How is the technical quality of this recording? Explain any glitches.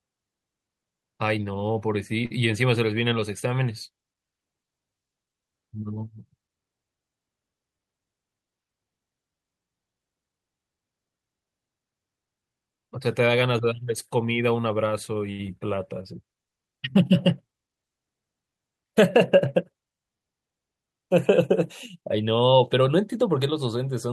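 The speech carries two short late-packet stalls and one brief concealed packet loss, all network-related glitches.

At 2.25 to 2.32 s and 15.32 to 15.41 s, a short stall from a late packet emptied the jitter buffer. The last sound is held about 51 ms, then 70 ms, before resuming.

At 15.47 to 15.50 s, short concealed packet loss leaves 20 ms missing. The receiver extends the preceding sound, heard as a brief smear.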